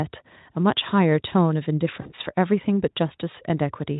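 At 2.01 s, VoIP packet loss concealed by the speech codec takes over for about 40 ms, the length of two lost frames. The decoder stretches its last pitch and filter into a fading buzzy tone or coloured noise. The speech stays weak until about 2.12 s.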